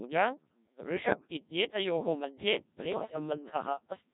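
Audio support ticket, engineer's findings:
Codec 2 vocoder, whole clip. Robotic, buzzy speech with heavy damage. The original waveform is gone. The decoder rebuilds the voice from sine waves using only pitch, voicing, energy and a coarse spectral envelope. The thin, synthetic tone fits the 1.3 kbit/s mode. Probable component: the digital-radio voice codec. Every consonant and breath is resynthesised rather than passed through, which explains the mechanical, hollow character throughout.

Bit errors on digital voice radio, 2.92 to 3.16 s. The speech breaks into warbling, robotic gibberish, with sudden jumps in pitch, level and tone colour. Probable cause: corrupted bits reaching the vocoder, an error rate of several percent. Each flipped bit sets pitch, voicing, energy or spectrum for a whole frame. The damage is in a handful of consecutive frames, so the disturbance lasts about a quarter second.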